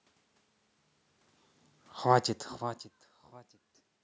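From 1.96 s to 3.66 s the automatic gain falls. The control found the input too loud, or its background noise too strong, and lowered its gain by about 4 dB overall, so the speech sinks steadily. The room noise sinks with it, which separates this from the changes in level near the start and around two and a half seconds, where the talker moves relative to the microphone and the background stays constant.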